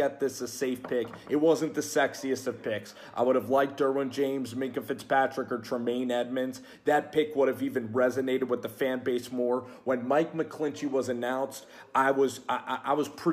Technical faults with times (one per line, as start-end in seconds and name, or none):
none